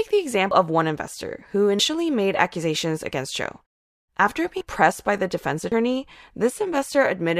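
At 0.51 s and again at 5.72 s the speech jumps forward, losing roughly 150 ms and 100 ms respectively with no gap. This is likely a dropped buffer (overrun): samples were overwritten before being read, splicing the surrounding audio together.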